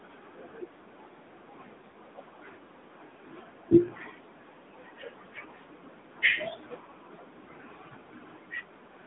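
Throughout the speech the sound is boxed-in and plainly buzzy, with a synthetic edge. The top stops at about 3.7 kHz and the lowest bass is absent below about 150 Hz. This is the AMR narrowband mobile codec. At 8 kHz sampling, nothing above 4 kHz can survive, and the voice is rebuilt from a vocal-tract model driven by a few pulses per 5 ms subframe. The plainly audible roughness fits a mid-rate mode near 10.2 kbps.

From 1.90 to 1.94 s there is a brief dip with a warble, after which the speech returns a little weaker and rougher before settling. This is lost AMR speech frames. A radio error corrupted the data, so the decoder filled the gap by repeating the last good pitch and vocal-tract settings at reduced gain. The short length of the disturbance fits a single lost 20 ms frame, too brief to fade fully to silence.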